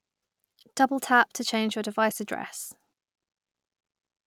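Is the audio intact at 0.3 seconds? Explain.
Yes, the audio is intact at 0.3 seconds, with no fault present at that moment.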